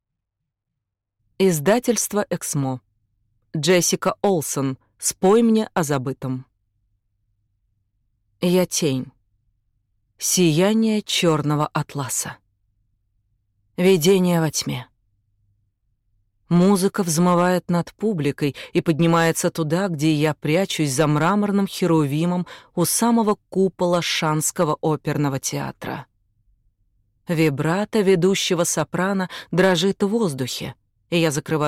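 There's hard clipping all the way through this audio. The signal is being pushed about 5 dB past what some stage in the chain can pass, so the loudest peaks get sliced flat instead of rounding over. Only a small fraction of the waveform actually hits the ceiling, so you don't get constant fuzz. What you hear instead is a gritty crackle on the peaks, where those flat tops throw off harsh high harmonics.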